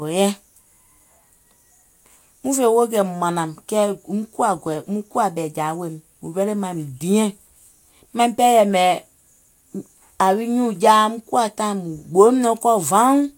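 No faults can be heard.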